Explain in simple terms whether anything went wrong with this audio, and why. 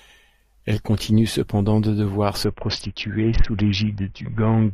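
From 2.44 s, right after "continue cependant de devoir", the speech turns dull and muffled, with a gritty hiss underneath, until the end. This is a Bluetooth SBC bit pool drop: a crowded wireless link forced much coarser encoding, losing the treble.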